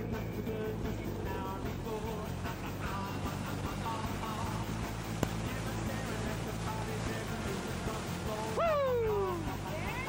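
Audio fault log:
0.46 s and 5.23 s: damaged data in a compressed stream. Each time, a brief blip cuts through the sound where corrupted bytes reached the decoder. It misreads the affected frame, loses its place in the stream and resynchronises at the next valid frame header.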